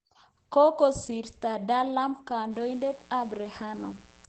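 The whole clip sounds muffled and hoarse, with nothing above about 8.5 kHz. That's likely Opus compression at a low rate, around 12 kbps, where the encoder drops into its SILK speech mode and narrows the band to wideband.

From 2.49 s to 4.28 s a steady, raspy mains buzz sits underneath, well below the speech. Sharp switching spikes on the 60 Hz supply, twice per cycle, spray harmonics of 60 Hz up into the kilohertz range, which gives it that grating edge.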